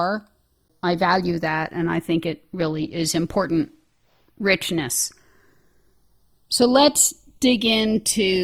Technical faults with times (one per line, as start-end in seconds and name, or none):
0.00-8.43 channels drifting apart
0.92-8.43 adaptive stream at a lower bitrate